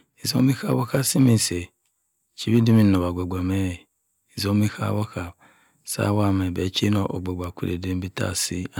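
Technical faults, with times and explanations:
0.38 to 1.35 s and 2.54 to 2.89 s, hard clipping: the speech runs about 4 dB, then about 3 dB, past what a stage in the chain can pass. The peaks get shaved flat, and those squared-off tops throw high harmonics that you hear as a gritty crackle.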